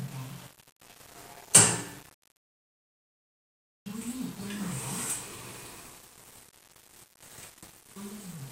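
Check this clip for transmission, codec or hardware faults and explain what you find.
One fault runs through the whole clip: low bit depth without dither, present from start to finish. The audio was likely reduced to 8 bits by plain rounding, with no dither, so the error tracks the signal. The result is a grainy, gritty distortion roughly 20 dB below the sound that shifts with it, harshest in quiet passages, where low-level detail breaks up or sputters.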